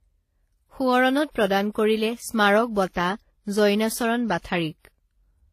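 Throughout the speech, two distinct kinds of codec artefacts are heard together. Nothing remains above 14.9 kHz. This points to likely transcoding between lossy codecs: HE-AAC near 20 kbit/s, then WMA 1 near 48 kbit/s. The second codec re-encoded the first one's artefacts.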